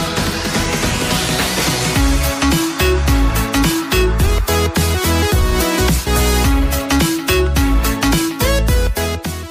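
No technical fault can be heard anywhere in this audio. There is nothing in it that calls for a time, a value or a cause.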